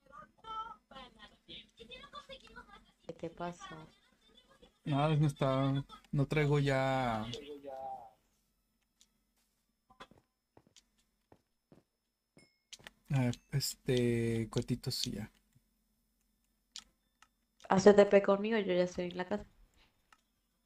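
There are no technical faults to describe, so there is nothing to place in time order.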